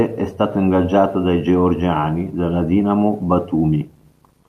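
No technical faults can be heard in the recording. Nothing interrupts or alters the audio at any point.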